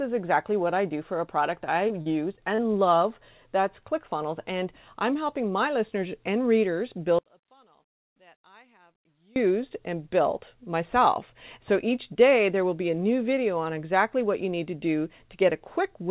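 From 1.88 to 2.60 s, between "for a product I" and "love that's", the speech turns choppy, with small pieces missing. This is repeated packet loss: short holes, the longest about 39 ms, each patched by stretching the preceding sound before the next hole arrives.

From 7.19 to 9.36 s, after "my listeners and readers" and before "and built myself", the voice nearly vanishes, dropping by about 32 dB into a faint residue. The likely cause is one channel inverted, so the matching left and right signals cancel when summed to mono.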